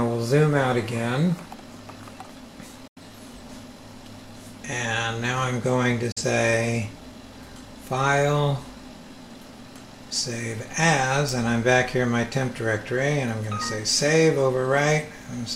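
At 2.87 to 3.00 s and again at 6.12 to 6.22 s, a digital broadcast dropout mutes the sound, with gaps of about 85 ms and 43 ms, consistent with two frames and then one failing. Each fades out over 8 ms, leaving a flat waveform and a blank full-height spectrogram stripe.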